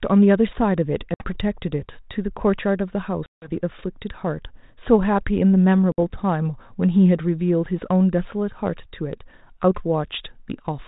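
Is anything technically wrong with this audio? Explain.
Yes, packet loss on an ADPCM call at 1.14–1.35 s, 3.26–3.61 s and 5.92–5.98 s. Hard-edged silent gaps of about 60, 160 and 60 ms leave the decoder's predictor and step size mismatched, so the speech resumes slightly distorted before settling.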